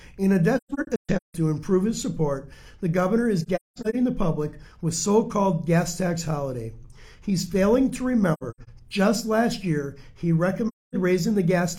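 Soft-edged dropouts break up the sound at 0.57–1.35 s, 3.43–3.95 s, 8.34–8.69 s and 10.68–10.95 s. Each one fades out and back in. This is AAC frame loss with muting: the decoder zeroed the missing frames, and its overlapping windows smoothed each gap's edges.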